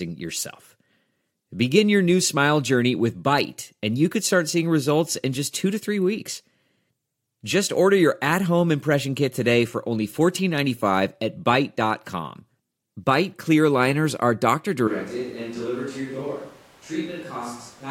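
At 14.88 s, just after "clear liners are doctor", the speech suddenly turns roomy and hollow, loses bass and drops roughly 10 dB, with room noise only about 20 dB below it until the end. The close microphone's signal has likely been replaced by a switch to a distant microphone.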